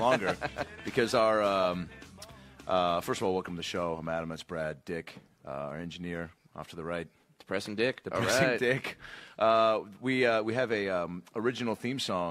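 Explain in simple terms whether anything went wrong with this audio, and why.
Nothing went wrong here, since there's no problem anywhere to point to in the recording, so you can just listen to it as it is.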